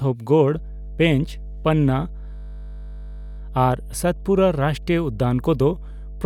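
A ground loop or nearby transformer is coupling the power line into the signal from 0.53 s to the end of the clip, producing mains hum. It sits underneath the speech as a steady low tone at 50 Hz, roughly 15 dB below the wanted signal. That is loud enough to remain audible from its onset to the end and to fill the pauses with a constant drone, with some low harmonics colouring it.

From 2.36 s to 3.38 s, the computer or its audio driver stalls while the sound hardware keeps replaying the same ring buffer. This is a system hang loop. A single 20 ms slice of the speech repeats exactly, about fifty times, at a rate of 50 Hz. Because the loop is so short, it fuses into a steady, rigid buzz rather than a stutter, and the natural flow of speech freezes into a mechanical tone. Once playback resumes, essentially no audio appears to be missing.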